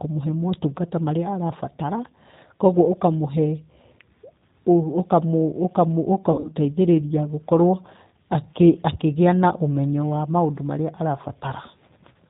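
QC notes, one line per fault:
throughout: G.729 codec, at 8 kbit/s, with plainly audible damage. The speech is rebuilt from a vocal tract filter, a pitch predictor and a few pulses per 10 ms frame rather than the original waveform, so it sounds rough and slightly synthetic. On a spectrogram nothing appears above 4 kHz, a hard ceiling across the whole clip. Harmonics look smeared and grainy, and the waveform shows a pulse-like, less natural fine structure.
6.32–6.51 s: VoIP packet loss concealed by the speech codec. About 120 ms of audio went missing, scattered across 160 ms, with the longest single gap 60 ms. The decoder filled each hole by repeating its last pitch and filter with falling gain, so the speech turns briefly stretched and fading and weakens before recovering. On a spectrogram the sound smears into a steady, stretched pattern. The waveform envelope sags through this stretch and stays low just after it.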